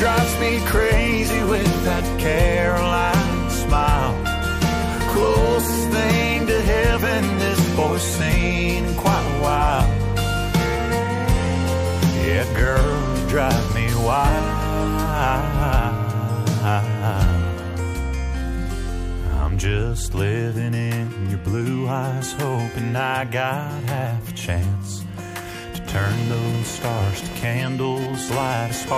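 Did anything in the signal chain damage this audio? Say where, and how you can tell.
Yes: computer activity noise in the analogue wiring, from 25.87 s to the end. The shared ground picks up a buzz pulsing at around 500 Hz, roughly 15 dB below the signal. It tracks the computer's load rather than the sound, which rules out steady mains hum.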